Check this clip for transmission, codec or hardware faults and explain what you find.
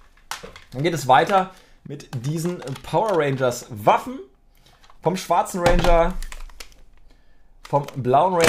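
One fault: a sudden gain jump from 1.87 to 1.99 s. For those 120 ms the level drops by about 7 dB at once, sound and background noise together, then returns. The likely cause is a digital gain change applied between adjacent samples without any ramp.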